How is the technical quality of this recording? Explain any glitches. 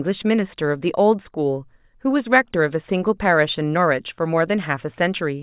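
No technical faults can be heard anywhere in the recording, so there are no glitches to explain.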